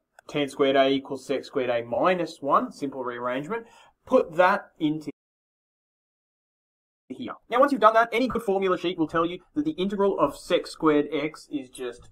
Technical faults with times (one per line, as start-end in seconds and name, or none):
1.94-1.97 corrupt frame concealed
4.19-4.22 corrupt frame concealed
5.10-7.11 playback stall
7.11-10.11 time-compressed catch-up
8.31-8.36 corrupt frame concealed
10.67-10.70 corrupt frame concealed